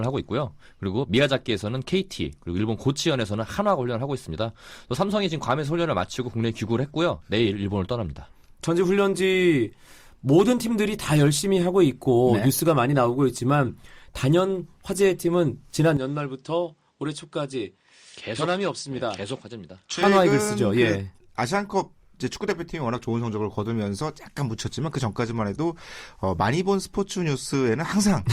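Speech clip in which, from 15.97 s to 20.03 s, the sound turns duller and a few decibels quieter with no gap, and faint new background noise appears, likely an input switched to a poorer device. A spectrogram shows everything above 9.6 kHz cut off flat, and the waveform envelope drops slightly until the original tone returns.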